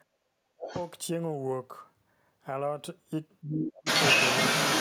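Right at the start, from 0.05 to 0.25 s, the room background dips by about 11 dB and comes back. That's background gated by the echo canceller: it clamped the mic down while the loudspeaker played, so the ambience briefly ducks out.

From 0.53 to 0.73 s the talker's speech drops sharply, something like 35 dB at its worst. It's likely speech suppressed in double talk, with both sides going at once and the canceller pulling everything down. Overlapping that, from 0.66 to 0.9 s, a second voice bleeds in, well below the talker. That's likely the other side's voice leaking through because the canceller didn't fully scrub the loudspeaker signal from the mic.

The same pairing returns later. From 3.42 to 3.86 s the talker is pushed down by around 20 dB, likely double-talk suppression again. Then from 3.77 s to the end, the other side's voice leaking through sits a bit louder than the talker. It's likely residual echo the canceller missed, and it dominates the tail.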